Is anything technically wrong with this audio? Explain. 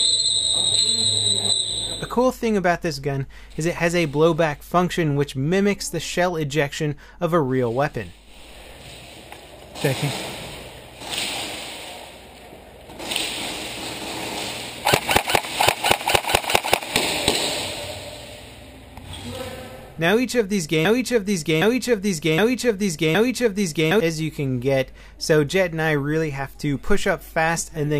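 Yes, there's a broken-record loop from 20.85 to 24.00 s. A chunk of about 0.77 s plays four times back to back, identical each pass, so the sound sticks and stutters in place for roughly three seconds before moving on. The likely cause is the player, encoder or stream stalling and re-sending the last fragment it had buffered. Whatever should have played during that stretch is simply gone, so the material jumps ahead when the loop breaks.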